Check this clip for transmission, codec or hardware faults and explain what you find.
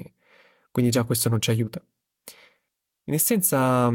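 No faults can be heard anywhere in this speech recording.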